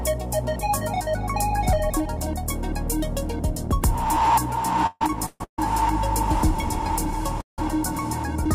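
Two network timing faults break up the flow of this audio. From 4.86 to 5.59 s there are repeated stalls (stutter): four separate gaps, the longest 144 ms, are filled with a continuation of the preceding sound, covering about 436 ms and roughly 60% of that stretch. Packets kept arriving late, so the jitter buffer emptied again and again. Nothing is lost, but the sound drags and stammers. What sets this apart from a freeze is the series of short, repeated holds rather than one. At 7.41 to 7.59 s a single hold of about 171 ms appears, most of it (140 ms) fading into silence before the audio resumes exactly where it stopped. This pattern fits a call audio freeze, likely caused by packets held up in transit long enough to drain the buffer once. The playout delay grows by the length of the hold, so a gap is inserted without any content going missing.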